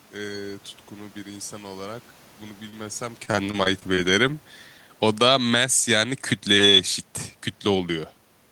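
At 2.69 to 2.74 s a short concealed packet loss occurs: about 20 ms of the speech arrived too late for the decoder, and the receiver bridged the hole by extending the preceding sound before blending back. The result is a brief smear in the voice.

From 3.25 to 3.99 s there is repeated packet loss with a robotic sound. Seven separate gaps, the longest about 23 ms, are each patched by continuing the last sound, so roughly a fifth of that stretch is synthetic. The voice turns choppy, with fragments missing. The talker also shifts position at the microphone around 3.0 s.

Between 5.01 and 7.06 s the automatic gain control keeps readjusting. From 5.01 to 5.78 s it judged the input too loud or its background too strong and pulled the gain down by about 8 dB, so voice and room noise sink together. From 5.71 to 7.06 s it reversed and raised the gain by about 7 dB, making both swell back. Within that rise, from 6.36 to 6.74 s, it briefly dipped by about 3 dB again.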